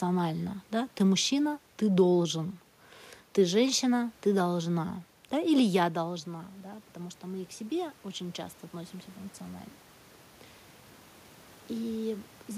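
From 5.91 s to 9.02 s the speech and the room noise behind it swell together, climbing by about 5 dB over roughly three seconds. This is automatic gain rising. Just before it, around five and a half seconds in, the talker moved away and the level reaching the microphone fell by about 13 dB. The gain control read that as a quiet input and slowly raised its gain, lifting the background along with the voice.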